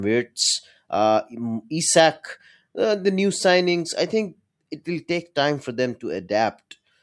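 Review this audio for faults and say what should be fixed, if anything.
Nothing to fix: no faults are audible anywhere in the speech recording.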